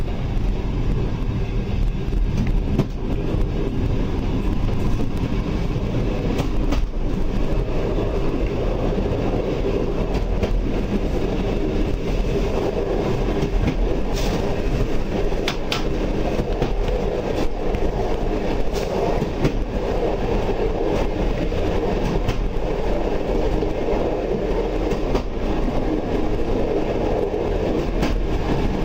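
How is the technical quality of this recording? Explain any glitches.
The opening four seconds carry one glitch: an adaptive stream starting at a low bitrate. From 0.0 to 4.0 s the treble is missing or sounds synthetic and codec artefacts are stronger, which points to a low-rate version of the stream, perhaps around 32 kbit/s Opus. The player began there to start quickly, then switched to a better version, perhaps 64 kbit/s, once it had measured the connection. At 4.0 s the quality improves suddenly with no gap or pause, which distinguishes it from a stall or rebuffering dropout.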